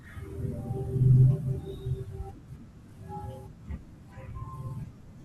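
From 1.53 to 3.16 s the speech picks up a gritty, inharmonic fizz, well below the speech level, that rides on loud and bright sounds. It is crude rate conversion: samples were simply repeated with no filtering, which fits a 32 kHz to 48 kHz conversion.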